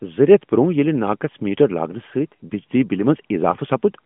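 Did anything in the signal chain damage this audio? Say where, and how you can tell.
Yes. The damage happens in the network stage. Between 2.48 and 2.52 s, just before "بجلی بِلہ", the speech briefly dips or warbles. This is a single lost AMR speech frame of about 20 ms. A radio error made the frame fail its checksum. The AMR-NB decoder then bridged the gap by reusing the last good pitch and vocal tract settings at reduced gain. Around it, the narrowband codec's 150 to 3400 Hz band and light coding texture fit the 12.2 kbps mode.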